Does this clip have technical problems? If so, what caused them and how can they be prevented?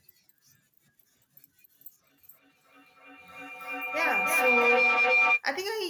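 Yes. A feedback howl builds from 2.09 s to 5.45 s, peaking about 5 dB above the speech. Two devices on one call share a room. Each loop gains level, narrowing to a tone near 2 kHz, with repeats roughly every 300 ms. To prevent it, mute one device or use headphones.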